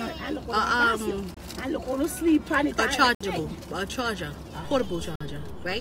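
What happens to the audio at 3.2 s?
At 3.15 s the sound cuts to silence for 59 ms and resumes at 3.21 s. This is a Bluetooth stall, likely from interference delaying packets until the headphones' buffer ran empty. The waveform shows a flat gap. The spectrogram shows a sharp vertical blank band across all frequencies.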